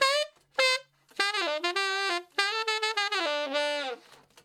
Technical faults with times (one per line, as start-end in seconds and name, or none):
0.80-4.13 digital radio blending to analogue